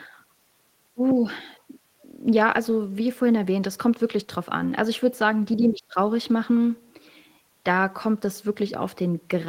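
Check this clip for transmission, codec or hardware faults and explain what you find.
No faults detected.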